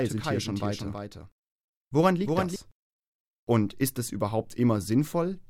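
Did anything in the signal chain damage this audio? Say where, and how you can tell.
Yes. From the start of the clip to 2.56 s there is a doubled audio track, most likely from the same signal reaching the mix twice through a slower capture path or an edit holding two copies out of step. A full-band repeat trails the original by around 300 ms, roughly 5 dB quieter, with no decay or room colour. It is already present at the start and then stops abruptly at 2.56 s.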